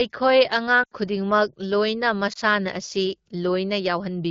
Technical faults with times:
0.83-0.94 lost AMR speech frames
2.33-2.38 lost AMR speech frames

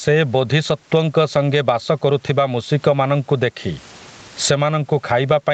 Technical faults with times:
0.00-5.54 gain pumping

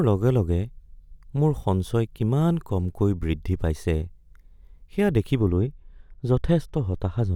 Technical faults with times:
5.39-7.35 de-emphasis applied wrongly

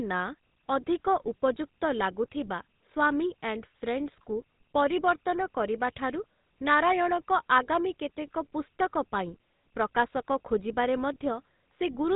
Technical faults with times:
0.00-12.15 GSM full-rate codec

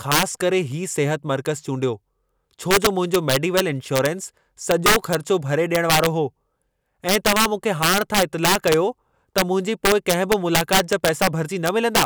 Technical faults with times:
0.00-12.05 integer overflow

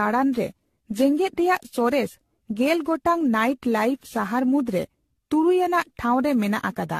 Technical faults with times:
0.00-6.99 generation loss

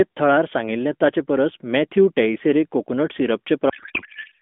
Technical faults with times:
3.70-4.41 codec payload misread

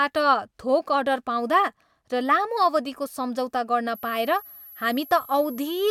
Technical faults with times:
3.95-5.91 switching supply whistle

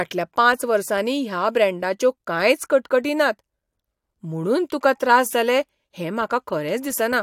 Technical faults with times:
none

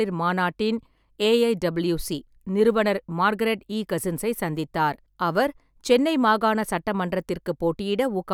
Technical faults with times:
none

